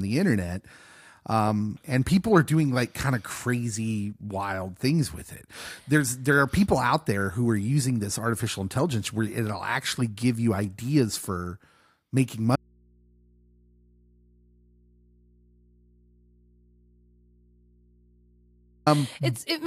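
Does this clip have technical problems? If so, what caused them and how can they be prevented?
Yes. Audio dropout to a faint residue from 12.56 to 18.86 s: the speech cuts out abruptly for about 6.3 s, leaving only mains hum roughly 35 dB below the signal, the likely cause being a lost connection while the input stayed open. Secure and test cables and connectors before recording.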